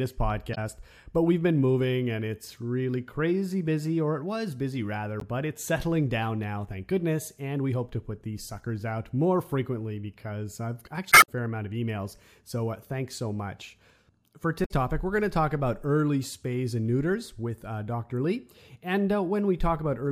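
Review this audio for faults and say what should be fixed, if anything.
Damaged data in a compressed stream causes four short bursts, at 0.51 to 0.58 s, 5.20 to 5.23 s, 11.09 to 11.29 s and 14.62 to 14.71 s. Corrupted bytes make the decoder misread frames and lose sync until it finds the next valid header, producing chirps or squawks. On a spectrogram each shows as a brief vertical smear or blocky patch of broadband energy; on the waveform, an abrupt discontinuity. Re-encode from an intact source and verify transfers with checksums.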